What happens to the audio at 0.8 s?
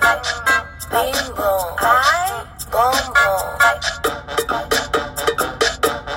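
Nothing goes wrong at 0.8 s: the audio plays through that moment intact, with no dropout, click, glitch or other audible fault.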